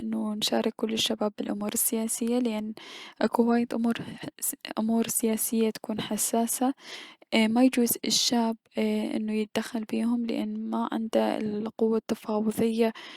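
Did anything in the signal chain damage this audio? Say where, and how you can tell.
No, nothing in this speech recording stood out on listening as damage from any stage of the signal chain.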